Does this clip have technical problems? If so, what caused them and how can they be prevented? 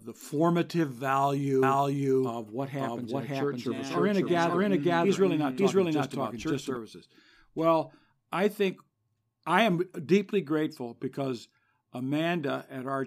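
Yes. From 1.63 to 6.77 s the speech carries a doubled audio track. A second, equally loud copy trails about half a second behind, with no room decay. It likely comes from a slower capture path recording the same source. Route each source through one path only.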